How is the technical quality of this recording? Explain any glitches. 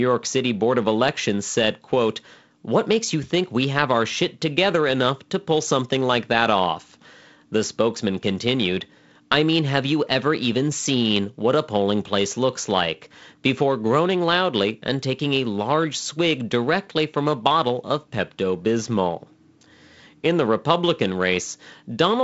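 The recording has no faults, and it carries the character of G.722 wideband telephone coding at 48 kbit/s, with the sound reaching up to 7.7 kHz and nothing above, and only light coding texture audible.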